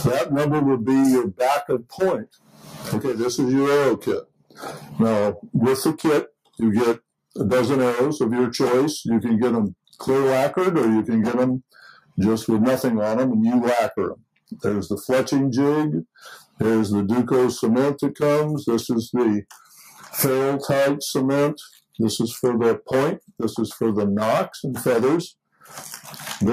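A noise suppressor built for speech is running on this material throughout, treating sustained content as noise, so levels pump by roughly 5 dB. Sound is cut by the noise suppressor at 1.78–2.0 s, 2.18–2.9 s and 3.97–4.6 s, dropping by about 12 dB, and at 4.79–4.94 s by about 8 dB, where held portions sink and thin.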